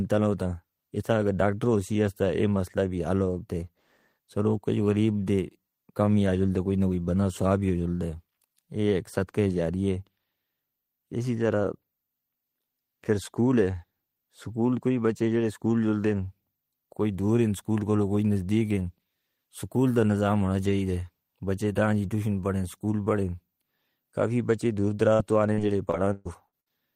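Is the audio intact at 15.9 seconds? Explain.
Yes, at 15.9 seconds the speech plays through intact, with no audible fault at that moment.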